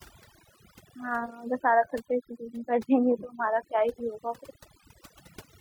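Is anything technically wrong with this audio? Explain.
Yes. Throughout the speech there is overdone noise removal: a reduction stage pushed so hard that any frequency band near its noise estimate is cut away, taking quiet parts of the voice with it and leaving a lowered, twinkling background. Unlike a noise gate, it strips individual bands continuously rather than muting everything between phrases.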